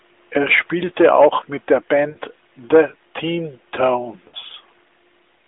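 Twice, radio errors corrupted the call so that speech frames failed their checksum and were dropped, giving lost AMR speech frames. The narrowband AMR decoder bridged each gap by repeating the last good pitch and vocal tract settings at falling gain. Just after "spielte auch mit der", from 2.10 to 2.17 s, and again from 4.28 to 4.36 s, the speech smears into a brief, fading warble, which fits about three 20 ms frames each time, then returns weak or rough for a moment.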